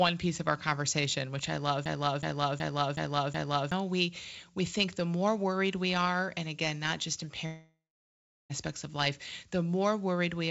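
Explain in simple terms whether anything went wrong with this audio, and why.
Two things went wrong in this speech. First, a system hang loop: right after "conversation which i love", from 1.86 to 3.72 s, the computer froze and the sound hardware kept replaying the same 0.37 s chunk, five times over, so you get a skipping-record stutter and about two seconds of real speech never come through before "we we think the" picks up.

Second, after "again not just in" at 7.46 s, the sound trails off into a fading buzz and then goes quiet for about 0.7 s, until "of life" comes back at 8.52 s. That's likely a long network dropout, with roughly a second of speech lost. The call codec underneath cuts everything above 8 kHz, which is why it sounds a bit muffled throughout.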